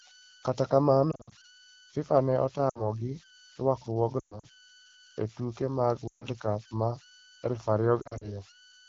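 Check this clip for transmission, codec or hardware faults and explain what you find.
Two kinds of fault are present in this speech clip: a steady converter idle tone and five bursts of lost AMR speech frames. The wideband coding itself, whose clarity points to an AMR-WB rate of about 12.65 kbit/s, adds only light damage.

Converter idle tones are present throughout. An undithered delta-sigma converter, fed low-level input, settles into repeating bit patterns, and here they produce a tone around 1.5 kHz. It sits about 25 dB below the speech. The tone is most audible in pauses, and as grainy texture under the speech.

Lost AMR speech frames occur at 1.11–1.33 s, 2.69–2.82 s, 4.19–4.46 s, 6.07–6.25 s (after "e tuke mag") and 8.01–8.33 s (after "ma aluf"). When a frame fails its checksum, the decoder repeats the last good pitch and vocal-tract settings at falling gain. The 60 ms gap at 2.69 s and the scattered short losses at 1.11 s and 8.01 s sound like brief drops toward near silence. 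The 120 ms run inside 4.19 s and the 140 ms gap at 6.07 s drop the sound to near silence within two frames and leave speech weak or rough as it returns.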